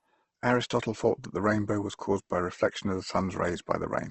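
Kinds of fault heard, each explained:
Opus compression: The speech sounds rough and grainy throughout, with plainly audible codec damage, and nothing is present above 8.2 kHz. This is likely Opus in its music (CELT) mode, at a low bitrate that fits roughly 16 kbps. Each band keeps its overall energy, but with so few bits the fine detail is refilled with noise or folded copies of lower bands. A spectrogram shows a hard ceiling at 8.2 kHz and speckled, smeared harmonics rather than empty holes.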